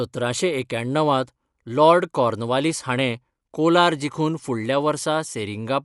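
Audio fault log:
Throughout: Dolby Digital compression, likely the cause of plainly audible coding damage across the speech. Nothing reaches above about 11.4 kHz, so the top octave is missing and the sound is dull. With so few bits to spend, the encoder leaves many frequency lines without mantissa detail and the decoder fills them with noise. That leaves a rough, fluttering grain around voiced tones, which fits a low bitrate of about 64 kbps.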